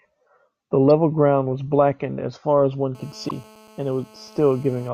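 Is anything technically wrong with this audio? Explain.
Yes, there are two problems in this speech.

There's damaged data in the compressed stream at 0.88 to 0.90 s and again at 3.25 to 3.32 s. Corrupted bytes throw the decoder off, so it misreads frames and loses sync while it hunts for the next frame header. That comes out as short chirps or blips.

From 2.95 s to 4.89 s there's GSM phone buzz. A nearby 2G phone on a call transmits in bursts about 217 times a second, and the audio circuitry rectifies those radio pulses. The result is a steady, raspy 217 Hz buzz with lots of harmonics, about 27 dB below the speech.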